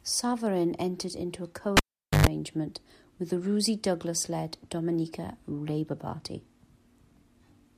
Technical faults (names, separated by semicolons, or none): cable pulled and plugged in